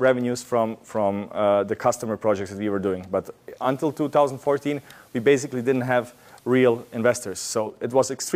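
At 3.52 s the receiver lost its digital signal and fell back to the station's FM broadcast, a case of digital radio blending to analogue, cross-fading over about 170 ms. From there to 7.74 s the sound carries the steady hiss of the FM path, sitting roughly 35 dB under the programme, while the loudness stays the same. At 7.74 s the digital stream returns and the hiss drops away.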